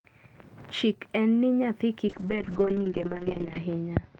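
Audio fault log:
2.08 s to the end, call bitrate drop: the speech loses its top end, with the audio band shrinking from about 20 kHz to 8 kHz, and turns rough and watery. The roughness points to the encoder being squeezed from roughly 40 kbps down to about 6 kbps. The worst stretch lasts 1.51 s and the quality never recovers before the clip ends. A simple low-pass filter would dull the sound but leave it clean. Here the coarse, swirly coding comes with the lost highs, and there are no gaps or repeats as in packet loss.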